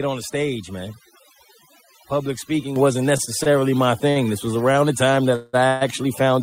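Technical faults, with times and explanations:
Throughout: overdone noise removal. The noise reduction was set too strong, so narrow frequency bands sitting near its noise estimate are pushed down or removed entirely. Quiet parts of the speech are taken out along with the noise. Between phrases the background drops and breaks up, with small twinkling specks left behind.
2.76 s: microphone volume stepped up. The input volume of the microphone was raised in a single step of about 7 dB. The call software judged the level too quiet and corrected it all at once. Speech and background jump up together at the same instant. Nothing eases the change in, so the step is a sudden lift in loudness partway through the clip.
3.17 to 4.76 s: repeated stalls (stutter). The receiving buffer ran empty seven times in this span. Each time, the last sound was stretched to cover the wait. About 159 ms in total was filled this way, roughly a tenth of the span. 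The longest wait was 56 ms. Nothing is lost from the speech, but it drags and hiccups repeatedly instead of flowing smoothly.
5.36 to 5.55 s and 5.67 to 5.83 s: call audio freeze. The speech halts twice, for 177 ms and then 137 ms. Each time, the last sound carries on as a fading buzz or hiss rather than dropping to silence. The speech then resumes where it stopped, so a gap has been inserted but nothing is missing. The likely cause is packets being held up in transit, which left the receiver's buffer empty.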